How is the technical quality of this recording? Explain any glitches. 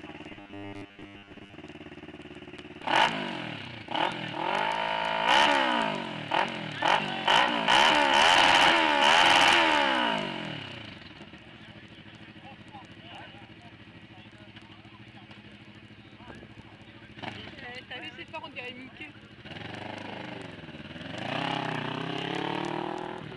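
There is one glitch, early on. From 0.32 to 1.54 s, robotic sound from repeated short buffers. Audio likely arrived too seldom, so about 10 ms chunks repeated, imposing a rigid, metallic 100 Hz buzz.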